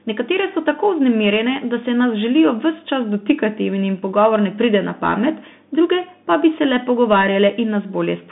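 Speech squeezed through a Bluetooth CVSD headset codec for the whole clip. The band runs only from about 150 Hz to 3.6 kHz, with nothing above 3.8 kHz, and the one-bit slope coding leaves plainly audible grainy, scratchy damage, which fits a 64 kbps headset link.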